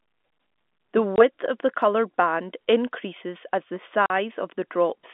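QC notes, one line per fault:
1.16 to 1.18 s and 4.06 to 4.10 s, packet loss filled with silence. The speech drops out in two hard-edged holes, about 20 ms and 40 ms long. That fits one and then two lost packets of 20 ms each. The receiver played silence in their place.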